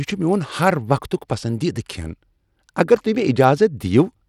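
Across the whole clip the speech carries a gritty, grainy texture, with the upper treble thin and flickering and nothing at all above 17.1 kHz. This is plainly audible codec damage, likely from Bluetooth SBC compression at a low bit pool, consistent with about 96 kbps.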